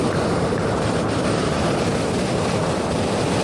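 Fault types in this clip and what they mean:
Wrong sample rate: the whole clip plays 1.5 times too fast with no resampling, so speed and pitch rise together and everything sounds hurried and raised by about seven semitones, a ratio that fits 16 kHz material played at 24 kHz. On a spectrogram, every component sits 1.5 times higher and events are squeezed in time, with the top of the original band ending near 12 kHz. The waveform shows correspondingly shorter cycles throughout.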